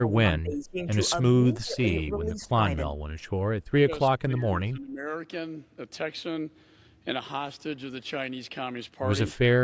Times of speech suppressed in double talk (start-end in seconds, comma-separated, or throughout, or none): 0.00-0.78, 1.42-1.90, 2.18-2.52, 2.90-2.99, 3.79-5.06